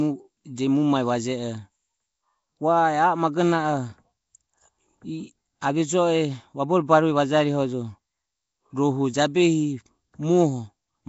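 From start to finish the speech carries a rough, hissy halo and a smeared, underwater character, with nothing above 7.7 kHz, the plainly audible damage of Nellymoser compression, likely from Flash's Nellymoser Asao codec at a rate that fits about 32 kbps. Weak bands receive no bits and are refilled with noise, which is why the hiss tracks the speech. Ordinary low-bitrate MP3 sounds swirly and metallic instead.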